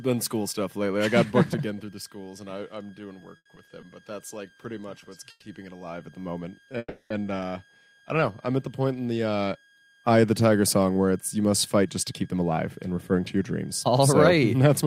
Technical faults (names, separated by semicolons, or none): switching supply whistle; repeated stalls (stutter); call audio freeze; jitter buffer speed-up